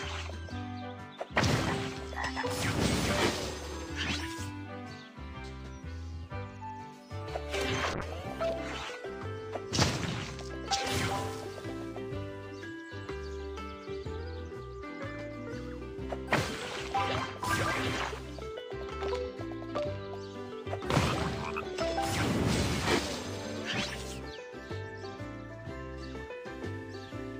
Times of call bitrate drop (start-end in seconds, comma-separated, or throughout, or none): 7.94-9.23